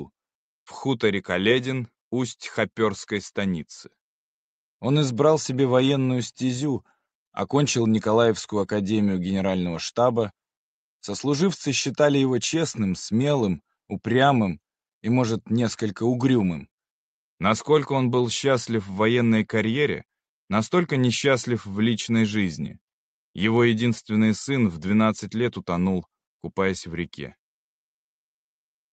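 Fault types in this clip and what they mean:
No technical faults detected.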